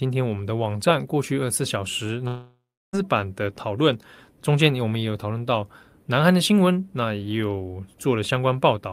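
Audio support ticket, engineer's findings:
Speech gap 2.27–2.95 s: the last sound smears into a fading buzz, then about 320 ms of near-silence, and 660 ms of audio never returns. Likely long network dropout exhausting concealment. Unlike a brief packet-loss blip, audio is skipped, not merely patched.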